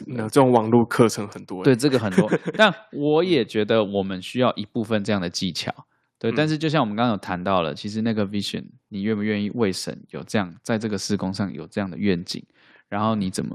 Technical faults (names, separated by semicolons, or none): microphone volume stepped down; microphone overload